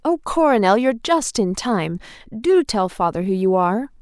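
No technical faults are audible anywhere in this speech recording.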